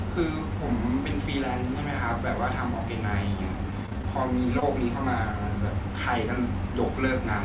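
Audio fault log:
3.71 to 4.06 s, repeated packet loss (robotic sound): five short gaps, the longest about 18 ms, left roughly a fifth of this stretch rebuilt from the preceding sound. Each patch continues the last sound before the next hole arrives, so the speech turns choppy, with small pieces missing.
4.6 s, short concealed packet loss: about 20 ms of speech never arrived in time, and the receiver bridged the hole by extending the sound just before it, then blended back into the real signal. The result is a brief smear or wobble in the speech.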